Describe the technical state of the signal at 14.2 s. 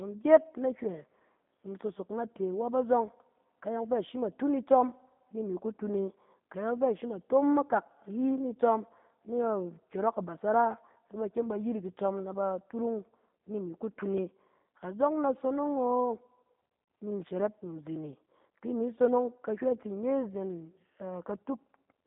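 A gritty, tearing crackle rides on the speech from 14.01 to 14.4 s. This is processor overload crackle: a handful of short buffers missed their deadlines and replayed stale audio with hard edges. Underneath, the speech is narrow, slightly rough and synthetic, with nothing above about 3.7 kHz. That is G.729 codec damage, consistent with an 8 kbit/s stream rebuilding the speech from a filter model.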